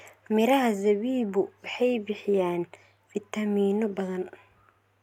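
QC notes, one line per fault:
Nothing stood out on listening.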